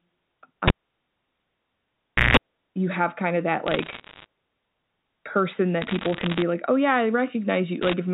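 At 0.68 s the cable gets pulled and plugged back in: a pop, about 1.6 s of near silence, then roughly 0.17 s of 60 Hz mains buzz as the tip touches, and another pop before "you have kind of".

Bit errors on the digital phone line show up as sharp ticks and crackle over the speech, from flipped bits in single samples. They come at 3.67 to 4.26 s right after "have kind of that", at 5.82 to 6.42 s just before "like oh yeah I", and briefly at 7.82 to 7.93 s.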